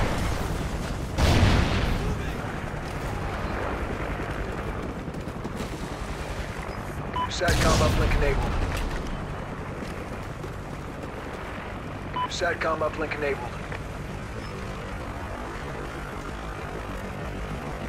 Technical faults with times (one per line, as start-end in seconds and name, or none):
14.12-17.89 time-stretched section